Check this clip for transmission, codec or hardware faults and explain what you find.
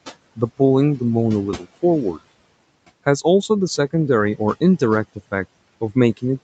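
One fault runs through the whole clip: noise suppressor artifacts. The suppressor tracks the steady room noise and turns down each frequency band, frame by frame, wherever it judges only noise is present. Between phrases the background drops by about 21 dB, then swells back beneath the speech. A noise gate would mute the whole signal at once, but here the dip is band by band. The room noise itself sits about 20 dB under the speech and belongs to the recording. The sound stops at 8 kHz because of the call path's bandwidth, not because of a fault.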